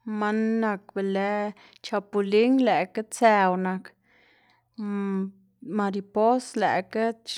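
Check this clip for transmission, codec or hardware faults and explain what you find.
Nothing turned up in this speech recording that points to a problem with the transmission, the codec or the hardware.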